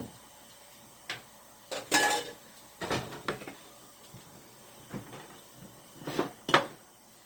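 Repeated lossy coding, likely about five successive passes through Opus at what sounds like 48 kbit/s, causes generation loss throughout these sounds. Each re-encode quantises on a shifted frame grid, so the errors pile up instead of cancelling. The result is swirly, hollow and smeared beyond what that bitrate alone would give, with transients blurred and softened, while the band itself still reaches up to about 20.1 kHz.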